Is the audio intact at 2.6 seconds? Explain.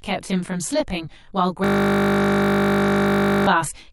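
No. At 2.6 s the audio is inside a system hang loop running from 1.64 to 3.47 s. The computer or its audio driver stopped supplying new samples while the sound hardware kept replaying the same ring buffer. A single 20 ms slice of speech repeats exactly, about ninety times, so the speech stops and a steady 50 Hz buzz takes over.

Channel delay (comb filtering) also affects this moment, as it does the whole clip. One channel arrives roughly 20 ms after the other, and summing them to mono cancels their shared content at evenly spaced frequencies, starting very low, around 20 Hz. The result is a row of closely packed fixed notches that give the audio a rough, slightly doubled sound.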